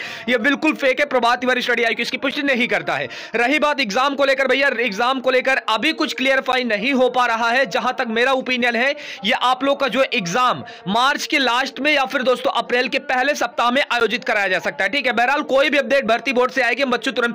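At 2.31 s, 6.52 s and 14.0 s the sound drops into a block of digital silence about 10 ms long and returns with no fade. The hard edges into and out of silence produce a short tick rather than an audible hole. Each gap has the same length, which points to a whole output buffer left unfilled rather than random damage. A fade-out dropout or a single-sample click would show neither the flat silent stretch nor that fixed length.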